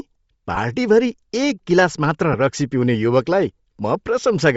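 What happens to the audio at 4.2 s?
Lost LE Audio frames at 4.20 s: a gap of about 15 ms, matching two 7.5 ms LC3 frames, never reached the decoder. To conceal it, the decoder repeated the last good spectrum with randomised signs. Because the loss is so short, the patch stays close to full level rather than fading away. The result is a tiny grainy smear in place of the true signal, a brief roughened blip before normal sound resumes.

Around this moment the audio also has a breathy, grainy edge with thinned-out highs, where the upper spectrum has been replaced by shaped noise. This is likely Bluetooth LC3 compression, at a rate consistent with about 32 kbps in 7.5 ms frames. The damage is plainly audible and colours the speech on both sides of the dropout.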